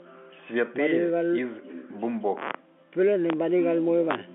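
No technical fault can be heard in the speech, which carries the narrow 200 Hz to 3.5 kHz band of G.711 A-law telephone coding at 64 kbps working as that format normally does.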